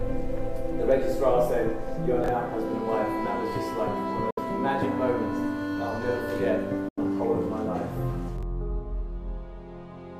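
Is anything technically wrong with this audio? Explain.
Yes. Near 2.24 s and again near 8.38 s, a brief jumbled stutter lasting about 43 ms is heard. These are chunks out of order: a roughly 21 ms block of audio plays one chunk late, swapping places with its neighbour and creating three hard joins.

At 4.30 to 4.39 s and 6.88 to 6.98 s the sound cuts to silence, gaps of 64 ms and 85 ms, then resumes further along. This is likely a Bluetooth dropout, where packets missed their deadline at the headphones and were discarded.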